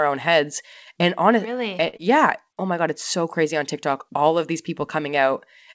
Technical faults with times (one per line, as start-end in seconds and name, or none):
1.88-1.96 short stall from a late packet
1.97-2.02 short concealed packet loss